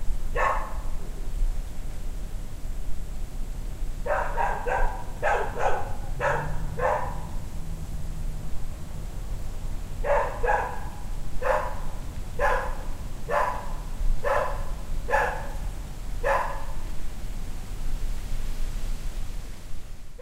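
From 11.18 s to 18.63 s the audio carries crude rate conversion. The error pattern fits a jump from 44.1 kHz to 48 kHz done by simply repeating the nearest sample, with no interpolation filter. That leaves an error roughly 30 dB below the signal, heard as a gritty, inharmonic fizz riding on louder and brighter sounds. A spectrogram shows faint spurious lines and mirrored images unrelated to the true partials, and the waveform shows small stair-step repeats.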